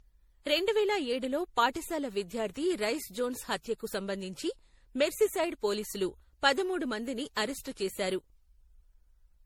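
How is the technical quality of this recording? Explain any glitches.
The technical quality is poor throughout. The speech has a swirly, watery texture, a hollow tone and soft consonant attacks for the full length of the clip, more damaged than a single pass of a lossy codec would leave. This is likely generation loss: the audio was decoded and re-encoded with MP3 around seven times, at a rate consistent with 64 kbit/s. Each pass re-quantises on a shifted frame grid, so noise and spectral gaps accumulate, and nothing lies above about 20.5 kHz.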